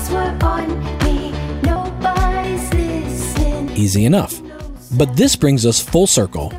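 The audio jumps abruptly at 1.76 s, 2.44 s and 3.68 s, each time with a sudden skip forward. These are most likely dropped buffers (overrun), where samples were overwritten before being read. Roughly a tenth of a second goes missing at the first, somewhat less at the second, and only a few hundredths at the third. There is no gap of silence, which sets this apart from a dropout. The surrounding sound is simply spliced together, missing material.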